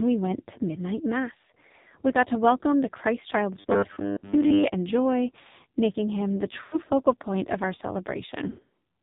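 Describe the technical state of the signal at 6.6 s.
Lost AMR speech frames run from 6.64 to 6.77 s, between "joy making him the" and "focal point of our". About 80 ms of audio is missing, which fits four 20 ms frames. The decoder stretches the last pitch and vocal-tract settings with falling gain, so the sound smears and fades rather than cutting to a hard silent gap. Underneath, the AMR narrowband mobile codec at 5.9 kbps removes everything above 4 kHz and makes the voice buzzy and synthetic. This is a steady coding texture, not a momentary break.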